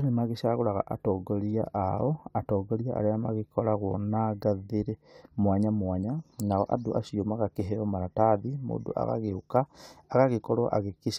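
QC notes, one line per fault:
No faults heard.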